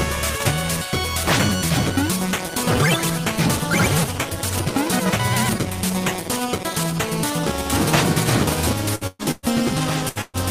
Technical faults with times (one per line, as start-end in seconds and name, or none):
8.95-9.46 burst of packet loss
10.09-10.37 burst of packet loss